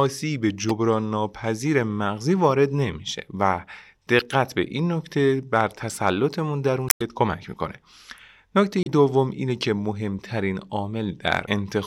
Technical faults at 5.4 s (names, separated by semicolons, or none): none